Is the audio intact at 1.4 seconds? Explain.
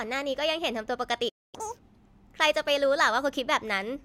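No. A playback stall runs from 1.29 to 1.55 s. The player likely ran short of data or had its output thread held up, so nothing reached the output for 241 ms. The speech cuts off mid-flow into silence, then resumes.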